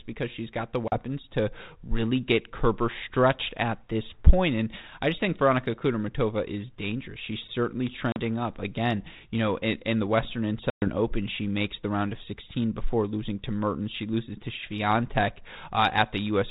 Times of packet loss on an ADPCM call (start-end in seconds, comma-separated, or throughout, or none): 0.88-0.99, 8.12-8.20, 10.70-10.89